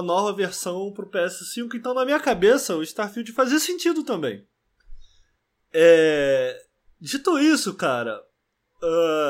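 No technical faults can be heard in this recording.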